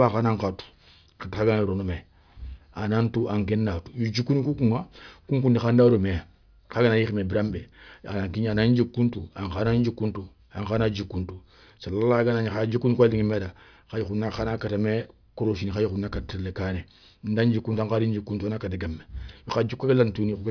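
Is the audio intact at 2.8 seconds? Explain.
Yes, at 2.8 seconds the speech plays through intact, with no fault at that moment.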